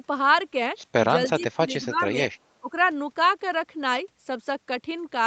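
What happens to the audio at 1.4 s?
A faint, delayed copy of the speech, trailing it by 300 ms and sitting far below the main level, is heard from 1.26 to 1.43 s. This echo leak is likely the far end's loudspeaker signal getting past its echo canceller and being sent back.

Overlapping this, from 1.29 to 2.17 s, the speech dips in level, by about 15 dB at its deepest and for around half a second in total. This is speech suppressed in double talk, likely the echo canceller turning the talker down along with the echo.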